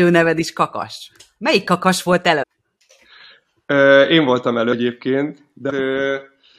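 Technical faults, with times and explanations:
2.42–2.44 s, 4.72 s and 5.69–5.71 s, compressed frames skipped: runs of compressed frames went missing or were rejected as damaged, so playback jumps ahead. After "kakas volt" and at 5.69 s about 400 ms of sound vanishes, and after "én voltam" about 200 ms. The jumps come in whole steps of the 23.2 ms frame length, which fits a 1024-sample frame.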